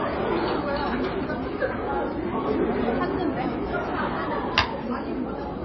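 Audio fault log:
Throughout, MP3 compression: nothing above 5.8 kHz, with plainly audible watery, swirling detail. Likely a bit-starved encoder, which fits a bitrate near 23 kbps.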